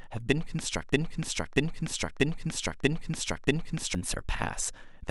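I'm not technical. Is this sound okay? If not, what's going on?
No, it isn't. From about 0.93 to 3.95 seconds there's a broken-record loop: the same 0.64-second slice of speech plays five times back to back. The playback likely stalled and kept replaying what it had, so the speech meant for that stretch is gone.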